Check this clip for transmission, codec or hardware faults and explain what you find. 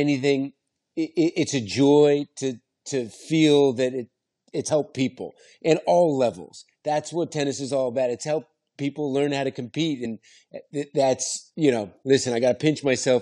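The clip has one kind of fault, occurring twice. Brief glitches break into the speech at 4.68 s and 10.04 s, each under 20 ms long. Both come from damaged data in a compressed stream: corrupted bytes make the decoder misread those frames and lose sync until it locks onto the next valid frame header.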